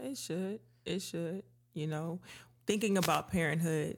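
A short burst of static swishes through the speech from 2.97 to 3.23 s, just after "know thinking". This is a wireless microphone noise hit: the radio signal faded as reflections cancelled, letting receiver noise rise over the voice.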